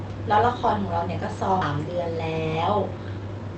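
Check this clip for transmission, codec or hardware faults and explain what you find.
Two faults turn up.

At 1.61 s there's a skip ahead: roughly four tenths of a second of audio got dropped while later audio was already queued, so playback jumps straight across with no fill. The join is abrupt, and a chunk of sound simply vanishes.

From 2.91 s to the end there's a jitter buffer speed-up. The buffer was holding more than it wanted, so it kept trimming pieces of one or a few pitch periods, around 70 ms in total. The sound runs about 9% fast at unchanged pitch and feels a bit rushed.

The Opus path itself sounds as expected, with its 8 kHz cutoff and ordinary coding texture.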